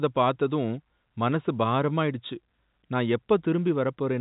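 No technical faults detected.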